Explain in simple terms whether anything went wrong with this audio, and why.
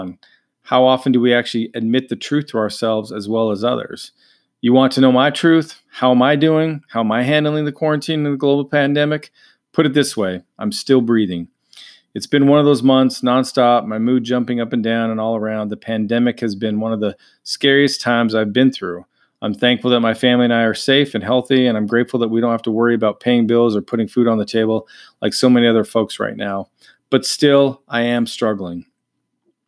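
Nothing went wrong that I could hear: listening to the recording of speech, no part of it stood out as faulty.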